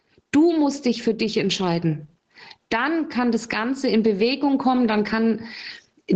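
Gain pumping throughout: loud and soft parts sit closer in level and the sound is squashed, likely a fast limiter pulling excessive gain down by around 20 dB.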